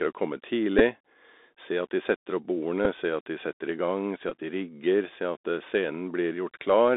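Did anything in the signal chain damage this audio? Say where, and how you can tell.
Yes. The Bluetooth CVSD headset codec, a narrowband codec stage, shapes the whole recording. The speech sits in a band of about 250 Hz to 3.7 kHz with nothing above, which fits the 64 kbit/s one-bit-per-sample CVSD stream. The damage is plainly audible. The delta modulator's adaptive step can't follow fast, loud high-frequency movement, so sibilants come out rough and scratchy, and a grainy hiss runs under the speech from start to end.

The wireless link between headset and phone also shows Bluetooth headset packet repeats at three points: 0.79 to 0.81 s, 2.85 s, and 4.29 to 4.32 s. In each case voice packets went missing and the decoder replayed the previous packet's bits in their place. The lost spans are 11.2, 7.5 and 18.8 ms, which fits runs of about three, two and five 3.75 ms packets. During each run the replayed packet repeats every 3.75 ms and produces a short buzz near 267 Hz. 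The longest is at 4.29 s.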